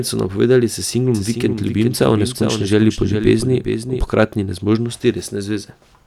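From about 1.1 s to 4.1 s the speech carries a doubled audio track. A second, full-band copy of the same audio runs roughly 400 ms behind the original at around 5 dB lower, so every syllable is followed by a distinct repeat rather than a smeared echo. The copy has no decay or room colour and cuts in and out abruptly at both ends. The likely cause is the signal being captured twice, once through a slower path.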